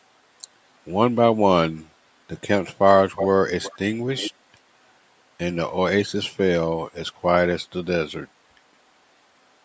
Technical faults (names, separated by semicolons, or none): echo leak